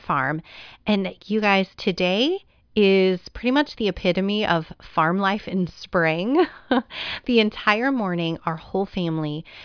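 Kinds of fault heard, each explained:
Nothing stood out as a fault on listening to this speech recording.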